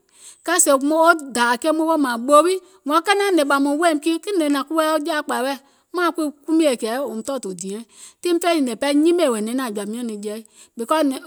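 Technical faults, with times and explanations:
No technical faults can be heard anywhere in the speech recording, and the signal stays continuous.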